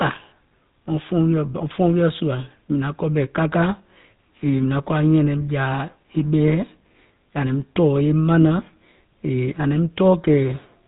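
Throughout the clip, the speech has passed through the GSM full-rate codec, which rebuilds the voice from a vocal-tract model excited by sparse regular pulses at a rate that fits about 13 kbps. Nothing above 3.8 kHz survives, and a plainly audible buzzy, gravelly roughness colours the voice.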